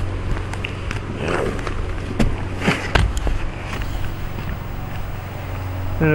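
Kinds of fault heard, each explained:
Video or display buzz: From 3.73 s to the end, a screen or video cable leaks into the audio as a rasping 50 Hz buzz at the picture's field rate, with hash above it and a thin 15.6 kHz line-rate whine, roughly 25 dB under the sound. Unlike smooth mains hum, it carries that high line tone.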